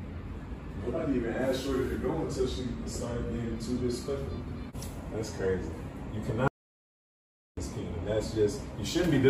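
At 6.48 s the sound cuts off abruptly into an audio dropout to silence lasting about 1.09 s, until 7.57 s. No room tone remains in the gap, so the input was likely lost, and the waveform shows a flat line, the spectrogram a blank vertical band.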